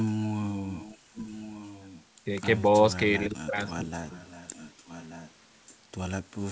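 From 0.66 to 0.98 s, 1.15 to 2.04 s, 3.92 to 5.3 s and 5.66 to 5.75 s, a quiet echo leak returns speech about 1.18 s late, roughly 20 to 25 dB down, likely from a far-end canceller missing loudspeaker pickup. Unlike room reverberation, it is a distinct repeat, not a smeared tail.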